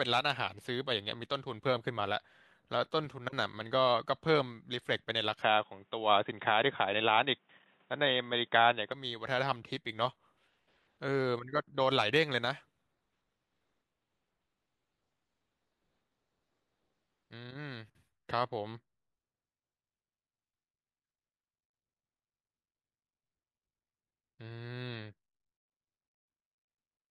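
From 5.42 s to 8.92 s the speech abruptly turns dull and boxy, with nothing above 3.8 kHz, then clears again just as suddenly. The likely cause is the input switched to a poorer device, a narrower-band microphone or headset call profile. What separates this from a plain bandwidth drop is that the tone, level and background all change together at the switch: loudness shifts by a few decibels and a faint new noise floor appears, with no gap at either change.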